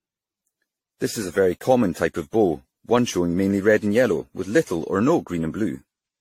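The speech has likely passed through a lossy encoder many times over, on the order of ten generations, with each decode and re-encode quantising again on a shifted frame grid so the errors stack up. Throughout, this generation loss gives a swirly, hollow, smeared quality with blurred consonant attacks, and nothing is present above 16.5 kHz. The character fits repeated AAC-LC coding at around 64 kbit/s, though it sounds worse than that rate alone would produce.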